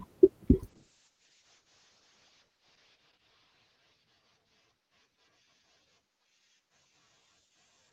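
From 0.72 s a call bitrate drop sets in. The top of the speech falls from 12 kHz to 8 kHz and the sound turns coarse, at its worst for about 2.27 s, consistent with roughly 32 to 8 kbps. There are no gaps, so this isn't packet loss.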